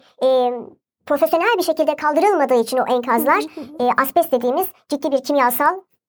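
From start to finish, playback runs at the wrong sample rate, which fits 32 kHz audio played at 44.1 kHz: speech is 1.38 times faster and about 5.5 semitones higher.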